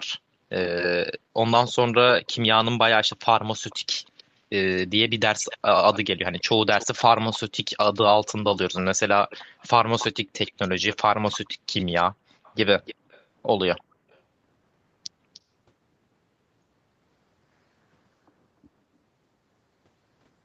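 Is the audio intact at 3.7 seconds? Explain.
No. From 3.70 to 4.23 s a faint delayed copy of the speech trails the original by about 310 ms, sitting very low beneath it, roughly 30 dB down, like a quiet ghost behind the talker. This is an echo leak, likely from a far end playing the call on a loudspeaker whose echo canceller let some of its microphone pickup through, so that fragment was sent back down the line.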